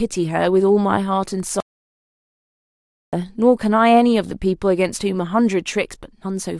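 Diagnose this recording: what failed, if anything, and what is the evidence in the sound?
Audio dropout to silence, from 1.60 s to 3.13 s: the speech cuts off abruptly mid-flow and returns just as abruptly about 1.5 s later. The gap is silent, with no room tone, hiss or tail of the preceding sound, so the recording chain kept writing silence while nothing reached it. The likely cause is a lost input at the device or link stage, such as a disconnect or a brief mute, and whatever was spoken in that stretch is gone.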